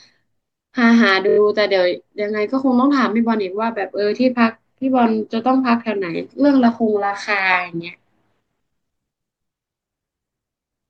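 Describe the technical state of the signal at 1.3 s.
Repeated frames from 1.28 to 1.37 s: a single compressed block of about 23 ms was delivered more than once, so the decoder plays it four extra times. This heard as a rapid stutter in the speech, lengthening it by about 93 ms.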